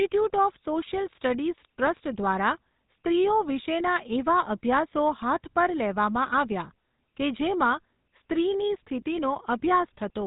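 Speech here has passed through the GSM full-rate codec for its whole length, and the damage is plainly audible. Nothing above about 3.8 kHz survives, so the sound is dull and boxed-in, but what sets this apart from a plain narrow telephone band is the buzzy, gravelly roughness. It comes from the codec rebuilding the voice by driving a vocal-tract model with regularly spaced pulses. The coarseness fits an old 13 kbps mobile link.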